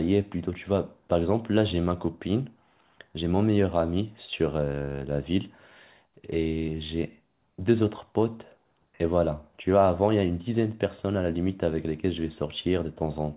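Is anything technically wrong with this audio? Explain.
No, nothing is technically wrong.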